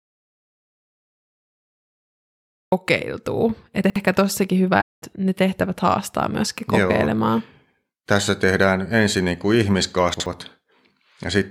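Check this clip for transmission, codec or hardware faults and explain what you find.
Three kinds of fault are audible in this speech: silence at the start, two brief scrambled moments, and a soft gap.

From the very beginning until 2.72 s there is total silence, with no room tone or background at all, and then speech begins abruptly as if already in progress. That flat, dead gap is the signature of an audio dropout to silence. The input was likely cut off, whether through a disconnected device, a broken link or an accidental mute, while the recorder kept writing silence, so whatever came before 2.72 s is missing.

At 3.84 to 3.96 s, just before "ehkä tossakin", and again at 10.14 to 10.26 s, just after "tehdään ensin niin kuin", there is a quick jumbled stutter. These are chunks out of order. In each case a 60 ms block of audio was written one chunk late, so it plays after the block that should follow it. 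Nothing is lost, but the swap creates three hard joins, which produce the garbled moment.

Between "ehkä tossakin" and "ne tehtävät haastaa myöskin", from 4.81 to 5.02 s, the sound fades smoothly into a hole of about 213 ms and fades back in. That soft-edged gap is AAC frame loss with muting, and its length fits roughly ten lost frames. The decoder set the missing frames' spectrum to zero, and the overlapping transform windows turned the gap's edges into brief fades instead of abrupt cuts.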